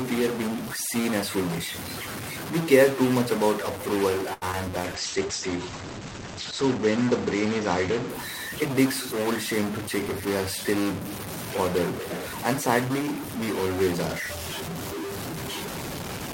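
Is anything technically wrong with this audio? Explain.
Yes, a few things. All the way through there's distortion with hiss in the pauses, likely a stuck bit in the converter or data line.

Right after "too much about approval", from 4.33 to 4.44 s, there's a short stall from a late packet: the receiver held the last sound for about 84 ms until the packet turned up.

Then come two short concealed packet losses, at 4.52–4.55 s and 4.65–4.68 s. Each gap got patched by extending the previous sound, so you hear a quick smear or wobble.

From 4.78 to 8.95 s there's a call bitrate drop, 48 down to 11 kbps, with bandwidth falling from 20 kHz to 8 kHz. It sits at the bottom for about 1.6 s and sounds muffled and rough.

From 9.58 to 10.72 s a jitter buffer speed-up trims roughly 70 ms of pitch periods. The audio runs at about 105% speed and sounds a bit rushed, with the pitch unchanged.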